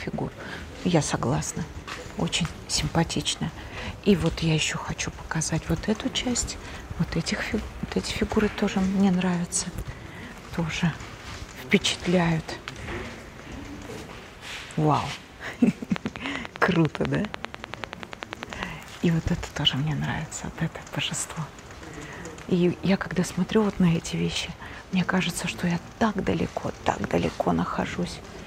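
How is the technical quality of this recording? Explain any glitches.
The recording has one clear glitch, a train of clicks from 15.96 to 18.64 s. About thirty pulses of near-identical shape tick at a steady 10 per second, standing well above the sound and audible in gaps too, likely interference or a faulty connection. Unlike random crackle, the spacing and shape stay uniform.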